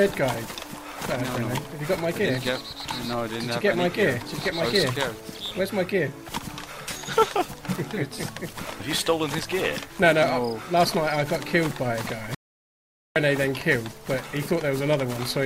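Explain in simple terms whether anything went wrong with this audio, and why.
Something did go wrong. At 12.35 s the sound cuts out to complete silence and returns at 13.16 s. That is an audio dropout to silence. About 0.81 s is lost. Even the room tone vanishes. The likely cause is a brief loss of input while recording continued.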